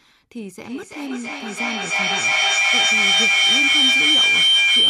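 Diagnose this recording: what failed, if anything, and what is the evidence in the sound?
Feedback howl from 0.61 s onward, in call processing: a two-device loop regenerates into a tone near 3 kHz, about 14 dB above speech, pulsing roughly every 0.3 s.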